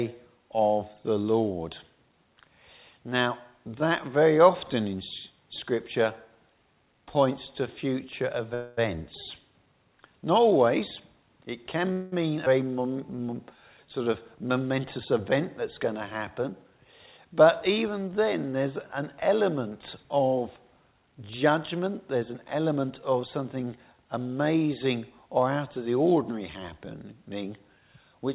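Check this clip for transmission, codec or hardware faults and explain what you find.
Several timing faults appear, heard through a narrowband call path with nothing above 4 kHz, which fits G.711 at 64 kbps.

A call audio freeze occurs at 8.54 s, lasting 0.23 s, and at 11.92 s, lasting 0.19 s. Each time the last sound hangs on as a fading buzz, then carries on from where it stopped. The likely cause is delayed packets that let the jitter buffer run empty.

A skip ahead at 12.46 s jumps the sound forward with almost no gap. Roughly a tenth of a second is lost because audio was dropped while later audio was already waiting.

A jitter buffer slow-down from 12.65 to 14.02 s makes the sound drag at 92% speed, with drawn-out sounds but unchanged pitch. Pitch periods were repeated, adding 118 ms to rebuild the buffer's reserve.

A jitter buffer speed-up from 14.74 to 17.42 s and again from 20.92 to 23.23 s makes the sound hurry at 106%, then 111%, with pitch intact. 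Short pitch-period pieces were trimmed out, roughly 0.15 s and then 0.3 s, to cut excess buffered delay.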